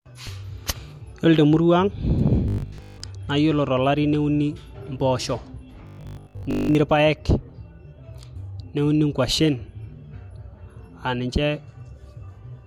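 From 2.48 to 3.02 s and again from 5.87 to 6.75 s, the speech takes on robotic sound from repeated short buffers: a rigid, metallic 50 Hz buzz, likely from replaying a stale 20 ms buffer over most of the audio. The waveform shows identical repeating cycles, and the spectrogram shows evenly spaced 50 Hz harmonic stripes.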